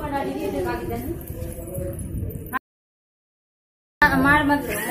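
At 2.57 s the sound cuts out abruptly into an audio dropout to silence, lasting 1.44 s until it resumes at 4.02 s. The gap holds no room tone, and whatever occurred there is lost. The input was likely interrupted while recording continued writing silence.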